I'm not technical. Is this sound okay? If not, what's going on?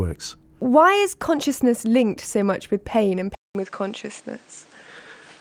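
No. At 3.35 s, after "much with pain and", a brief 0.2 s gap leads to duller sound with new background hiss at unchanged loudness: likely the input switched to a poorer device.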